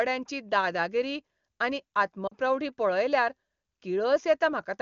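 Speech carried over AMR wideband (HD Voice), whose coding is clean at what sounds like the top rate, around 23.85 kbit/s, shows one fault: lost AMR speech frames from 2.27 to 2.34 s. For about 40 ms, which fits two dropped frames, the decoder repeats the last good pitch and vocal tract settings at falling gain, so the sound smears and dips, then returns briefly weak. Unlike a dropout, it never goes abruptly silent.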